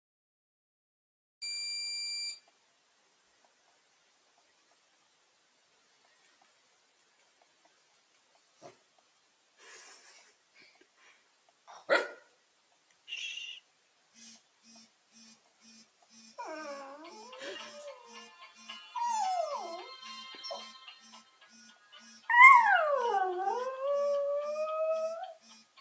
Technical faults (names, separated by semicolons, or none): noise suppressor applied to music or sounds; sound cut by the noise suppressor